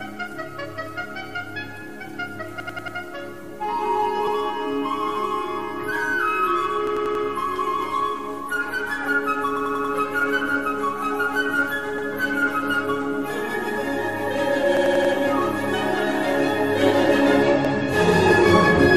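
A repeated buffer stutters at 2.6, 4.27, 6.87, 9.57, 11.98, 14.77 and 17.65 s. Audio arrived late, so a 93 ms slice, which fits a 4096-sample buffer, replays: four extra times at 2.6, 6.87, 9.57 and 14.77 s, once elsewhere. Waveforms show identical blocks; spectrograms show vertical seams at each join.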